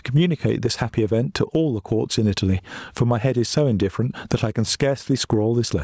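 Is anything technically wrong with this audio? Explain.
Yes. Gain pumping runs throughout the speech. The gain swings by about 15 dB, pulling down under loud syllables and recovering in the pauses, likely from a fast limiter clamping excessive gain. The waveform shows flattened peaks and a level that rises and falls.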